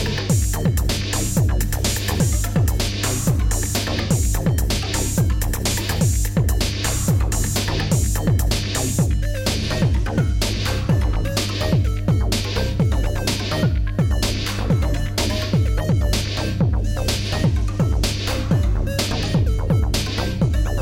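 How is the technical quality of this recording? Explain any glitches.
Technical quality is poor because of a loud mains hum that runs through the whole clip. A ground loop or nearby transformer couples the 50 Hz power line into the signal, giving a steady low drone only slightly quieter than the wanted sound; a spectrogram shows an unbroken line at 50 Hz with fainter harmonics above.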